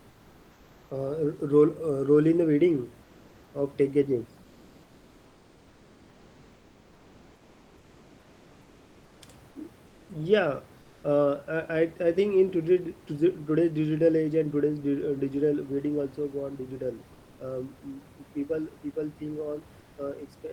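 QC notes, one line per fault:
0.00–0.89, 3.03–3.53 (ending just before "of tech"), 4.43–9.21, 9.87–10.09, 10.81–11.03, 19.79–19.97 (right after "people people think"): comfort noise in place of the background. In each pause the real room noise drops out for a flat, featureless hiss, mostly about 2–3 dB quieter. The likely cause is Opus DTX muting the sender during silence.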